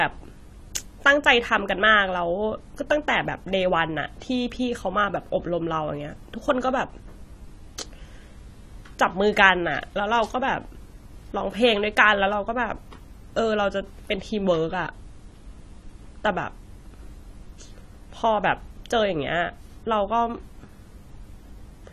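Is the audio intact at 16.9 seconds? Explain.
No. At 16.9 seconds the speech carries the same AAC compression damage heard across the whole clip, plainly audible: nothing survives above about 14.1 kHz, and sibilants and held vowels sound smeared with a fizzy, warbling grain. Quantising each frame's spectrum coarsely against a hearing model leaves gaps and substitute noise, likely from AAC-LC at a low rate around 32 kbps. A simple low-pass filter would dull the top without that shifting, noisy texture.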